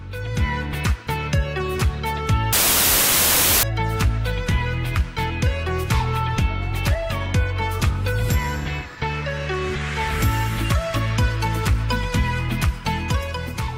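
From 2.53 to 3.63 s there's a wrong sample width: loud noise burying a slowed, low sound at 0.75x speed, which fits 32-bit samples read as packed 24-bit.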